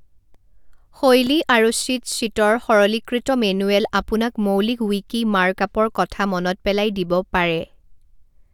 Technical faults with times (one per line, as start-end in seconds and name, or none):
0.34 block of digital silence
1.27 block of digital silence